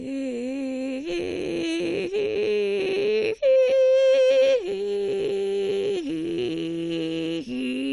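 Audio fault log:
Throughout, MP2 compression: the music is dull, with nothing above about 11.3 kHz, and a gurgling, granular roughness sits on what remains as upper sub-bands drop in and out and the surviving bands are coarsely quantised. The damage is plainly audible, which fits a rate around 48 kbps and is likely a starved MPEG Layer II encoder. Unlike a simple low-pass filter, the top flickers rather than rolling off cleanly.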